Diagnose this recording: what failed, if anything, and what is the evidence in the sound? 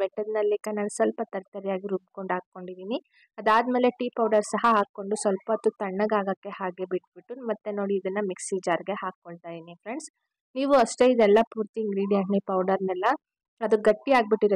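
Codec stage, corrupt frame decoded: flipped bits sent energy to wrong frequencies, giving brief errors of about -25 dBFS at 0.64 s and 4.83–4.85 s.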